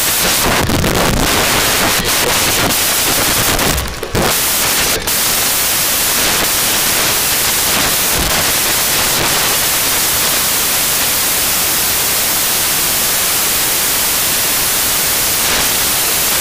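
From start to finish the audio is a case of samples built from the wrong bytes: each value is assembled with its bytes misordered or misaligned, so the rapidly changing low bits dominate. The result is loud, harsh broadband noise, unlike added hiss, which stays steady regardless of level.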